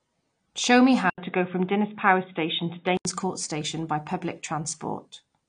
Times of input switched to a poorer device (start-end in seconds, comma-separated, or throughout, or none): 1.10-3.05